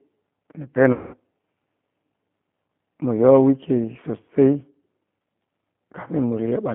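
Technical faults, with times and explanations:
Throughout: G.729 codec. The audio passes through an 8 kbit/s speech codec confined to a band of about 150 Hz to 3.4 kHz, so everything above that is gone and the low end is thin. Each 10 ms frame is rebuilt from a vocal tract filter, a pitch predictor and a handful of pulses rather than the real waveform. The coding damage is plainly audible as a rough, slightly synthetic texture on the speech.
0.93–1.16 s: VoIP packet loss concealed by the speech codec. About 200 ms of audio never arrived, which fits ten 20 ms packets dropped. Instead of silence, the decoder kept repeating its last pitch and filter settings while lowering the gain frame by frame, so the sound smears and fades. Because each frame depends on the previous one, the speech stays weak or distorted just after the gap ends.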